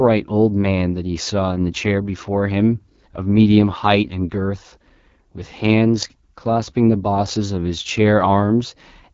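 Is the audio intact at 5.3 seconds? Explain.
No, at 5.3 seconds the speech is still running through AMR wideband (HD Voice) coding, which is present for the whole clip. The coarse vocal-tract model leaves it rough and raspy, with noise-filled highs, which fits a low rate like 8.85 kbit/s.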